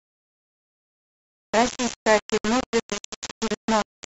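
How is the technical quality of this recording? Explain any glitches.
Poor: the speech is heavily distorted throughout, and there is one brief dropout.

Throughout, the speech sounds coarse and grainy, with a harsh fizz that rises and falls with the speech itself. Quiet syllables break up or sputter rather than fading smoothly, and the distortion sits only about 10 dB below the speech. The likely cause is low bit depth without dither: the waveform appears to have been rounded to only about 3 bits, so the error tracks the signal instead of forming a steady hiss.

From 2.38 to 2.44 s the sound cuts to silence for about 65 ms, then resumes. This fits a Bluetooth stall, likely caused by interference delaying wireless packets. The headphones' buffer ran empty, so playback halted until the missing data arrived. The gap is short enough to register as a sudden hole in the speech rather than a pause.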